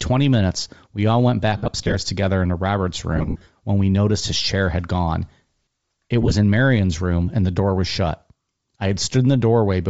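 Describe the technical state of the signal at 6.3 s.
At 6.3 s the signal is inside a burst of lost LE Audio frames, running from 6.22 to 6.32 s. Dropouts totalling 52.5 ms are scattered across about 90 ms, and no single gap runs much past 15 ms. During each gap the decoder fills in by repeating the last spectrum with random signs. The speech there turns to a brief, noisy smear instead of clean sound. The gaps are too short for any fade to silence.

Underneath, the whole clip carries Bluetooth LC3 compression damage that is plainly audible. The upper spectrum is thinned and filled with noise, which gives the speech a breathy, grainy edge. The transform framing fits 7.5 ms frames. The degree of damage points to a low bitrate, around 32 kbps. A Bluetooth LE Audio link using the LC3 codec is the likely cause of this texture.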